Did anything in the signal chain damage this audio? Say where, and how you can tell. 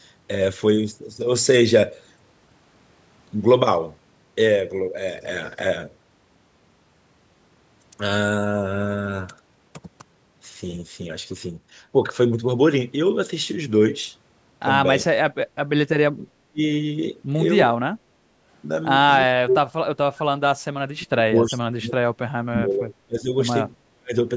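Yes, at the call-processing stage. The speech drops out in pieces at 15.01–15.06, 16.17–16.61, 17.67–17.76, 19.26–19.71, 20.11–20.56, 20.77–23.32 and 23.9–24.15 s. The dips range from about 10 dB to about 40 dB, and the longest stretch is gated for roughly two seconds. This is likely speech suppressed in double talk. The echo canceller mistook near-end speech for loudspeaker echo and attenuated it. The call's normal high-pass and 8 kHz upper limit are not part of the fault.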